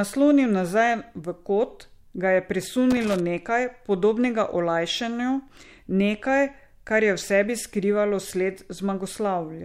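At 2.91 s the speech is broken by an irregular burst of scratchy crackle lasting about 0.29 s, until 3.19 s, with the sound chopping in and out underneath it. This is loose connector crackle. A worn or dirty contact somewhere in the cable or jack path was making and losing contact as it shifted, so the signal was switched on and off in rapid, uneven bursts, and the sharp edges of those breaks produce the ragged scratching.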